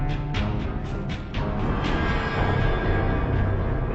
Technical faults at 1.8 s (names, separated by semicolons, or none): stereo read as mono